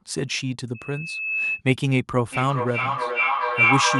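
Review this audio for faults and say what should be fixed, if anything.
From 0.74 to 1.62 s there's a loudspeaker feedback squeal: a 2.6 kHz tone swelling over roughly the first 0.7 s until it's about level with the speech, because a mic is hearing its own loudspeaker with loop gain above one at that frequency. To prevent it, pull the mic back from the speaker, drop the monitor gain, or notch out 2.6 kHz.

From 2.32 s to the end there's a feedback howl around 2 kHz, with the loop repeating roughly every 0.4 s and the howl peaking about 3 dB over the speech. That's two devices on the same call in one room, each pass round the loop coming back louder. To prevent it, keep only one device's mic and speaker live in that room, or use headphones.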